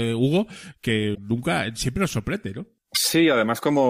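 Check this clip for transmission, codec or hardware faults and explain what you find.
Two short glitches break up the speech, at 1.14 to 1.18 s and 2.94 to 2.97 s. Each time, the audio skips ahead with a brief glitch. The likely cause is a broken MP3 bit reservoir: frames about 26 ms long went missing, and the following frame read borrowed bytes belonging to another frame.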